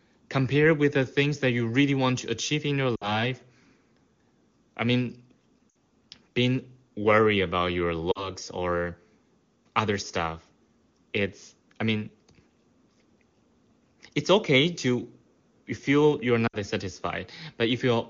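Speech, with lost AMR speech frames at 2.96–3.23 s after "to achieve in your", 5.70–5.75 s between "I mean" and "being worried about your", 8.12–8.30 s after "being worried about your", and 16.47–16.56 s. Each gap comes from two or three lost 20 ms frames. The decoder fills each gap by stretching the last good sound as it fades, so the sound drops to near silence within two frames and the voice comes back weak or rough for a moment. The sharp wideband coding around these gaps suggests the top AMR-WB rate.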